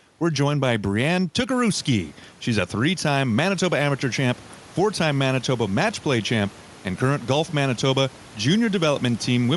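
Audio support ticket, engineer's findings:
Bluetooth LC3 compression, throughout: likely LE Audio transform codec running at modest rate. Upper spectrum partly zeroed and noise-filled, which fits about 48 kbps with 10 ms frames. Speech takes on a plainly audible breathy, grainy edge. Room noise rising around 1.5 s, sitting about 25 dB under speech, unrelated.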